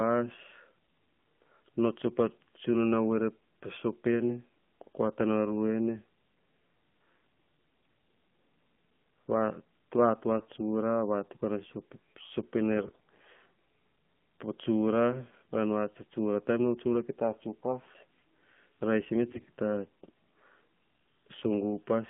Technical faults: AMR narrowband mobile codec; AMR bit errors

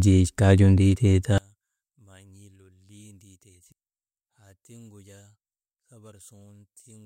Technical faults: one channel inverted

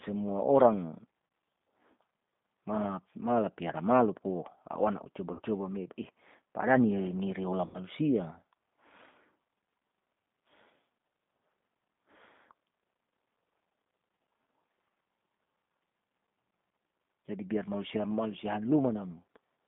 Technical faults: G.729 codec; VoIP packet loss concealed by the speech codec

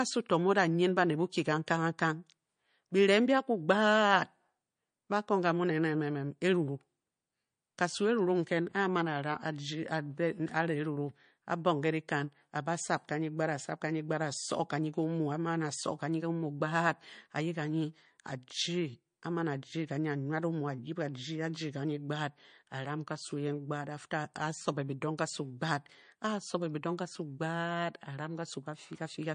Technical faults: MP3 compression

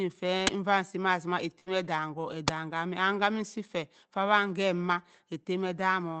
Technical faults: uninitialised buffer; burst of packet loss; lost packet rebuilt from error correction

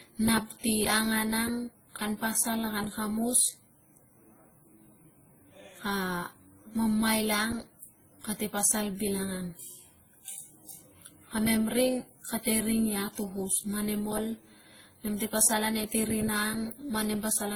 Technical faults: transcoding between lossy codecs

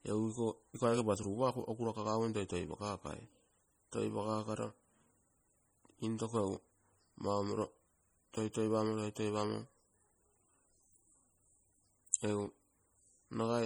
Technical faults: MP3 compression

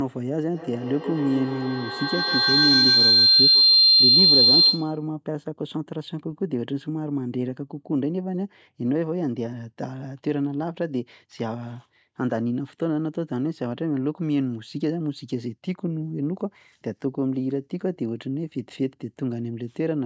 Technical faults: feedback howl

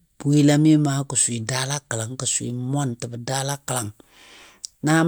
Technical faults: none

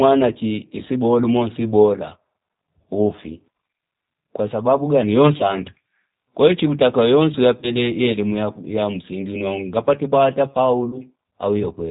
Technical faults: G.729 codec; VoIP packet loss concealed by the speech codec

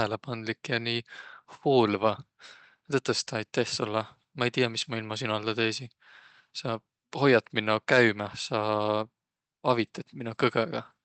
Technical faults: none

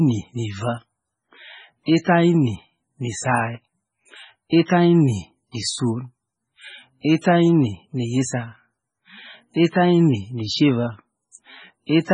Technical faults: MP3 compression; pre-echo

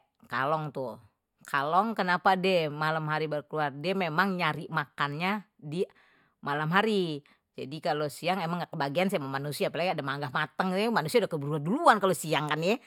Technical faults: none

